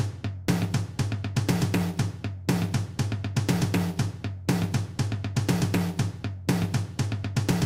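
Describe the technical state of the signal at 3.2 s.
At 3.2 s the signal is intact, with no dropout, distortion or other fault audible at that moment.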